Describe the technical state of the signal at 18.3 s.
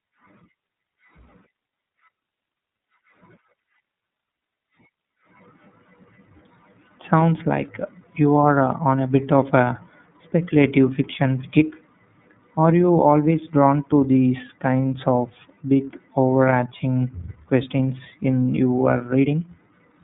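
At 18.3 s the iLBC codec damage runs through, as across the whole speech clip. Each short frame, which fits 30 ms framing, is coded on its own, giving plainly audible roughness and a synthetic edge. A spectrogram shows a hard ceiling near 3.8 kHz with nothing above.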